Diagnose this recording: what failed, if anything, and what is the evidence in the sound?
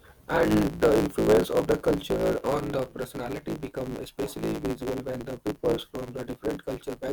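A block size mismatch (truncated) at the driver or buffer stage runs throughout the speech: each block's tail is dropped, leaving a 109 Hz buzz and speech 1.16 times fast at near-normal pitch, fitting 512-sample writes. A spectrogram shows a steady 109 Hz line, and the waveform jumps at each block edge.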